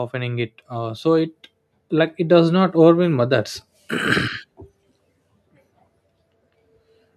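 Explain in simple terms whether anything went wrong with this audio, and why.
Something did go wrong near the start of this speech clip. From about 0.11 to 2.69 seconds, you can hear automatic gain rising. The recording device decided the sound was too quiet. So it slowly turned itself up. Because it raises everything at once, the voice and the background noise both swell together. The level climbs steadily over those two and a half seconds. It settles just before the words "overwhelm others".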